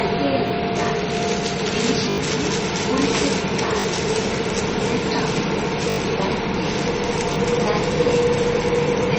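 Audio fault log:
throughout: low-bitrate audio saved at a high bitrate. Nothing is present above about 8.4 kHz, and the swirly, smeared texture of heavy MP3 coding runs through the whole sound. The file is likely a 32 kbit/s MP3 later re-encoded as 320 kbit/s MP3. The second pass keeps what it is given almost exactly but cannot restore the treble or detail the first encoder discarded, so the high bitrate brings no audible gain.
0.48–0.50 s, 2.10–2.18 s, 3.80–3.84 s, 5.90–5.98 s, 7.34–7.36 s: repeated buffer. At each point a tiny slice of sound is replayed with a hard seam, which fits a 20 ms buffer. It repeats once at 0.48 s and 7.34 s, twice at 3.80 s, and four times at 2.10 s and 5.90 s. With a buffer this small, each is heard as a click or brief buzz. Playback resumes slightly further on, so a few tens of milliseconds of sound go missing each time.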